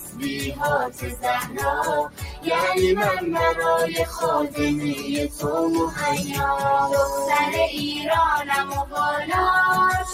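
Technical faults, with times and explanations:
Throughout: noise suppressor applied to music or sounds. A speech-oriented noise suppressor is treating sustained, steady parts of the audio as background noise and pulling them down, so the level swings by about 10 dB as it decides what to keep. Onsets survive while held material and tails sink, giving a pumping, thinned feel. On a spectrogram, steady horizontal bands fade and return in patches; the waveform envelope breathes unevenly.
0.00–0.61 s, 0.88–1.21 s, 1.43–1.59 s, 2.05–2.47 s, 5.29–5.44 s, 8.64–8.96 s: sound cut by the noise suppressor. In each stretch the suppressor judged the sound to be noise and attenuated it more than its surroundings. The drop reaches about 11 dB in most of these, about 13 dB at 2.05–2.47 s and about 7 dB at 5.29–5.44 s. Decays are chopped short and the sound briefly hollows. On the spectrogram these appear as darkened vertical gaps; on the waveform, sudden dips in amplitude.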